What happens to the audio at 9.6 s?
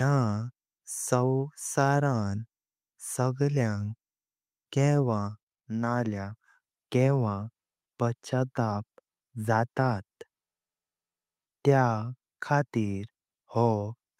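Nothing goes wrong at 9.6 s: the speech carries straight through that moment intact, with no dropout, click or glitch to be heard.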